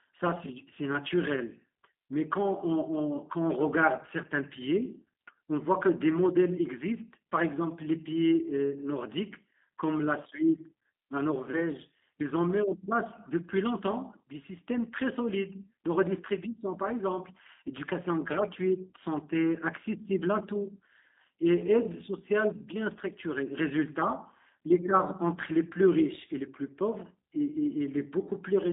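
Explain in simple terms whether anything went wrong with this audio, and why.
G.729 codec damage runs through the whole clip, from start to finish. This phone-call codec doesn't send the speech itself. It sends a rough description of the speaker's mouth shape, pitch and a few pulses, and the far end rebuilds speech from that. Here the rebuilt speech stays between about 250 Hz and 3.7 kHz, so it sounds thin and muffled, with a plainly audible rough, slightly robotic edge.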